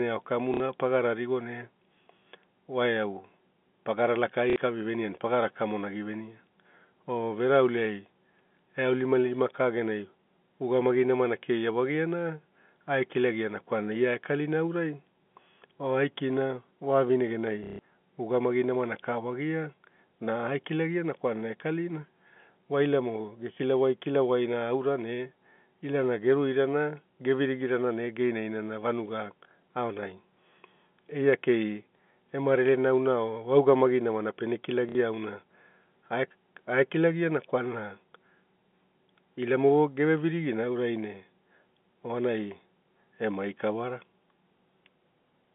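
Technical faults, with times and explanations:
0.54, 4.5, 17.64 and 34.89 s: packet loss with last packet repeated. Lost 60 ms gaps, and 150 ms before "ugamai namana ka wagia", replay the previous packet, which fits 30 ms packets. The joins miss the pitch, so the repeats stutter robotically.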